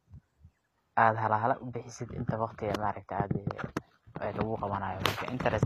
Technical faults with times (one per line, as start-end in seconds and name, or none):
0.00-5.66 HE-AAC compression